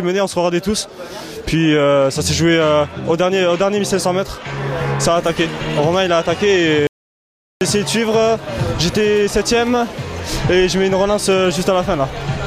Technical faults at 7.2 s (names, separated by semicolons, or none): audio dropout to silence